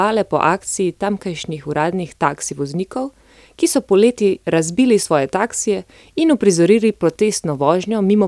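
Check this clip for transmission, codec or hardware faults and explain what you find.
Nothing in this speech clip raises a flag, so there's nothing to report.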